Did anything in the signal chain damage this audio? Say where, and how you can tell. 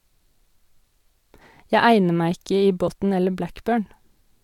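Yes, at the codec decode stage: compressed frames skipped at 1.40 s and 2.87 s. Each time the speech jumps ahead by roughly 50 ms, a few whole frames missing or rejected. On a spectrogram the formant tracks break abruptly at each join.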